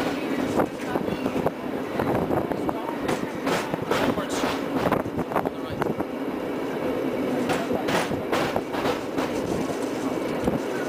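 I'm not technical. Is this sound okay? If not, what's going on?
Yes, nothing wrong can be heard in this sound.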